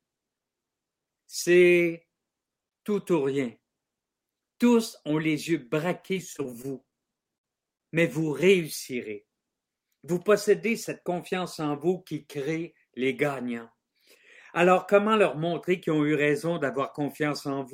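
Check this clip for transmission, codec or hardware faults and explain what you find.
There's one transmission fault. From 6.03 to 7.81 s, repeated packet loss (robotic sound): a rapid run of dropouts, gaps up to 57 ms, some patched by stretching the last audio, some simply missing, giving choppy speech.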